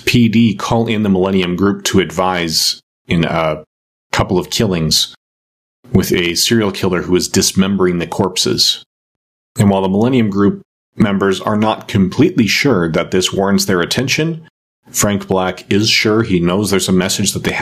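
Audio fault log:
Throughout, gain pumping: the level swings by about 20 dB between gaps and loud passages. The speech sounds squashed, with loud and quiet syllables pressed close together. This is likely caused by the input gain being set far too high for the microphone, with a fast limiter or compressor clamping down on each loud sound and releasing during the gaps.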